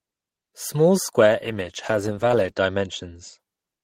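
A call bitrate drop runs from 1.2 s to about 3.45 s in this speech recording. The encoder's rate falls from 32 kbps to 12 kbps and stays at its lowest for about 1.4 s. Coding that coarsely makes the voice sound rough and watery. Audio bandwidth shrinks from 20 kHz to 8 kHz, so the top end goes muffled until the rate climbs back near the end.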